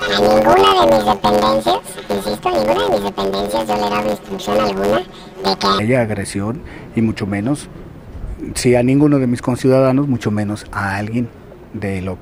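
From 0.0 to 5.79 s, planar audio is being read as interleaved: each block stores all its left-channel samples followed by all its right-channel samples, but the reader takes them as alternating left-right pairs. Every 10.88 ms block therefore plays twice at double speed, left half then right half, keeping the overall pace intact. Because the blocks are so short, the sound takes on a robotic buzz at about 92 Hz, the block rate, with no clear octave shift.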